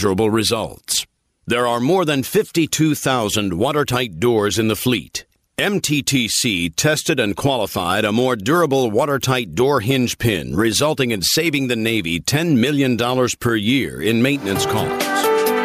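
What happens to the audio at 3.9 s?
At 3.9 s you're hearing gain pumping, which runs through the whole clip: the gain swings by around 15 dB, pulling loud and soft parts closer in level and squashing the sound, likely from excessive gain hitting a fast limiter.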